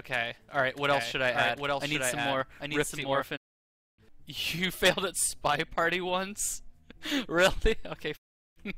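From 0.91 to 3.25 s the sound is heard twice: a dry, full-band copy trails the original by roughly 0.7 s at about 5 dB lower, starting and stopping abruptly. This doubled audio track is likely a second capture through a slower path mixed back in.

At 3.36 s the audio fades to silence within 20 ms and returns at 4.00 s, leaving a 608 ms hole. A second gap runs from 8.16 to 8.58 s, losing 384 ms. Each is a digital broadcast dropout: the receiver muted when frames stopped arriving intact, and everything transmitted during those gaps is gone.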